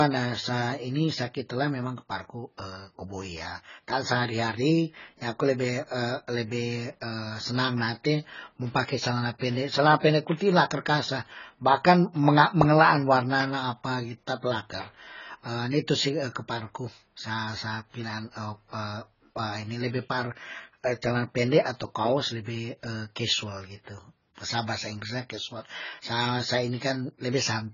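Throughout, the speech stops dead above 7 kHz, and sibilants and held vowels warble and fizz. That shifting, smeared texture, which a plain low-pass filter would not add, marks heavy AAC compression, likely AAC-LC at a very low bitrate around 16 kbps.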